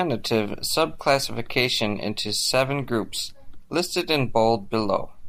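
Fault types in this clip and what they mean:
No technical faults detected in the speech.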